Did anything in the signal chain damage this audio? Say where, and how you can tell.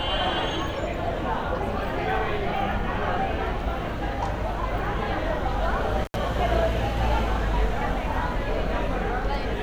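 Yes: intermittent contact in the analogue wiring, from 6.04 to 6.16 s. The sound drops out for about 71 ms with crackle at both edges, as a loose cable or plug briefly opens the circuit and leaves faint hiss until the connection closes again.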